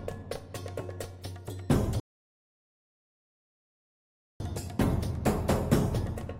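At 2.00 s the player runs out of downloaded audio and halts until more data arrives, a rebuffering stall. The sound drops to silence until 4.40 s, then picks up exactly where it stopped, so nothing is lost but about 2.4 s of dead air is inserted.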